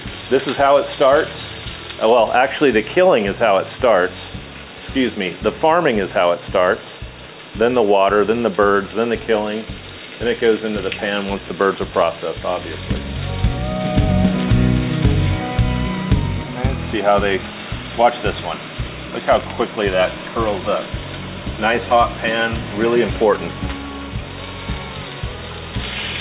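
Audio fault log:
No faults detected.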